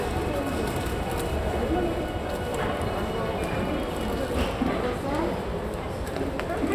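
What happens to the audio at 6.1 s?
Nothing goes wrong at 6.1 s; the audio plays through that moment intact, with no dropout, click or distortion.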